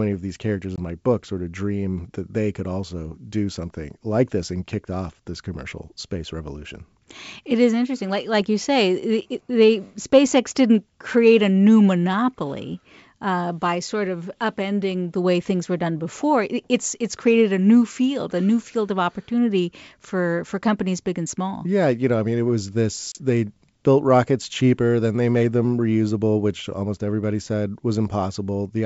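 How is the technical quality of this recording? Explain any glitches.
The recording has two short gaps from packet loss on an ADPCM call, carried over G.722 wideband coding whose 64 kbit/s hiss is faint.

At 0.76 s, between "of these characters" and "my book sort of", about 20 ms (a couple of packets) drops to silence; at 23.12 s about 30 ms (a few packets) goes. The decoder's predictor and step size lose track, so after each hard-edged hole the speech returns slightly distorted before it settles. That recovery is what sets this apart from a simple PCM dropout.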